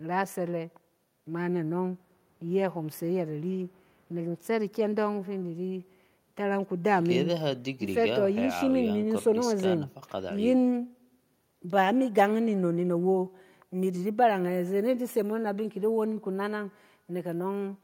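Nothing in the speech recording stood out as a technical fault on listening.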